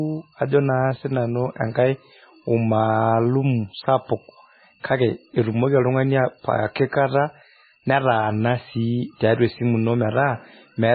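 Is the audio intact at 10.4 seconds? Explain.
No. At 10.4 seconds, as through the whole clip, the speech carries heavy damage, likely from MP3 compression at a very low bitrate near 16 kbps. Starved of bits, the encoder cuts everything above 4.5 kHz and drops weak frequency lines frame by frame, leaving a dull, watery, swirling sound.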